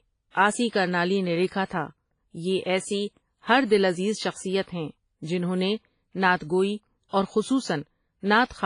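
Across the whole speech clip the sound is band-limited, with nothing above about 10.2 kHz, and carries a ringing, washy hiss that swells and fades with the signal rather than sitting steady like background noise. This is heavy damage, likely from WMA compression, and fits a low bitrate around 24 kbps.

At 1.65 s and again at 7.09 s, a sharp onset is preceded by about 45 to 48 ms of hiss and sounds softened. This is pre-echo: the codec spread noise meant for the loud attack over the quiet moment before it. Unlike reverberation, the smear arrives before the attack, not after.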